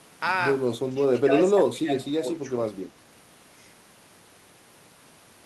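Speech suppressed in double talk at 0.73–1.0 s, 1.25–1.31 s, 1.48–1.93 s and 2.19–2.48 s: the level dips by about 5, 10, 15 and 10 dB, deepest in the third stretch. This is likely an echo canceller confusing the talker with far-end echo and attenuating both.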